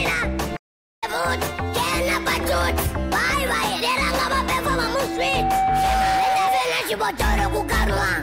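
At 0.56 s the sound just drops out and stays silent until about 1.04 s, roughly 0.46 s of nothing, before picking up again. That's a playback stall, likely the player running short of data or its thread getting blocked, so output simply halts until it recovers.

Then from 4.84 s to 6.67 s there's loudspeaker feedback squeal: a steady 765 Hz tone swells up over most of a second and ends up sitting a few dB above the rest of the audio. The mic is hearing its own speaker, and at that frequency the loop gain has gone past one.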